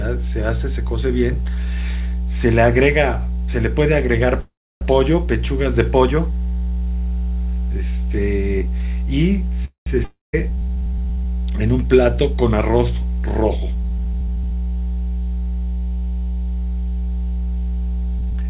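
A steady mains hum at 60 Hz runs under the whole clip, about as loud as the speech itself. The low tone sits constantly beneath the speech rather than rising and falling with it, which is typical of a ground loop or a nearby transformer feeding the power line into the signal path. It is audible even under the narrow, telephone-like band, which has nothing above 4 kHz and fits a G.711 mu-law call path at 64 kbps.

At 4.4 s the speech stops and a short call audio freeze follows, lasting until 4.83 s. The last sound trails off as a fading buzz or hiss into about 0.31 s of silence, and then the speech resumes where it paused, with nothing skipped. A second, shorter freeze runs from 9.65 to 9.88 s, with about 0.13 s of silence before the audio picks up again. Both are likely packets held up in transit, leaving the jitter buffer empty until they arrived.

From 10.04 to 10.35 s there is a long network dropout. 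The sound again decays into silence, about 0.17 s of it, but this time the speech returns further along, with roughly 0.44 s of material never heard. The likely cause is a stretch of packets that never reached the receiver. Since more audio is lost than the gap lasts, the overall delay comes out shorter by something like 0.15 s.

Right after that, from 10.39 to 11.25 s, a jitter buffer slow-down follows. The receiver stretches the audio to rebuild its reserve, repeating single pitch periods over and over. The speech runs at about 85% speed with its pitch unchanged, so sounds become drawn out. Across that stretch about 135 ms is added.

At the very end, from 18.19 to 18.43 s, a jitter buffer speed-up does the reverse. The receiver trims a surplus of buffered audio by cutting out short pitch-period pieces in quick succession. The speech races at about 166% speed without any change in pitch, and sounds hurried. 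Roughly 150 ms is removed.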